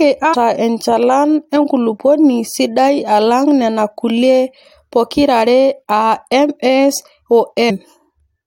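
Speech, with two short bursts of damaged data in a compressed stream: a brief glitch from 0.33 to 0.35 s, just before "enchalan enkulupuoni sidai alang", and a shorter blip at 7.69 s. Each time, corrupted bytes made the decoder misread frames, lose sync and resync at the next header.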